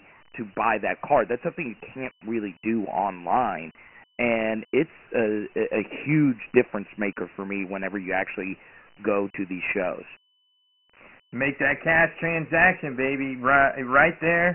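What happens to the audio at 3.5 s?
At 3.5 s the speech sounds thin, muffled and gritty, with a rough hiss riding on every syllable and nothing above 3 kHz. This is Dialogic VOX ADPCM damage, present for the whole clip rather than starting at that moment. The codec stores each sample as a 4-bit step from a predicted value, and 24 kbps points to a 6,000-sample-per-second rate, which caps the band at 3 kHz. Coarse step adaptation leaves heavy, grainy quantisation noise trailing the speech.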